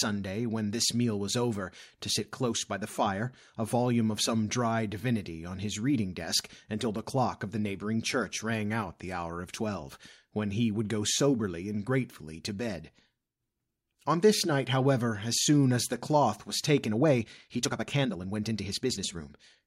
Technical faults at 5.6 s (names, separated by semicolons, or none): none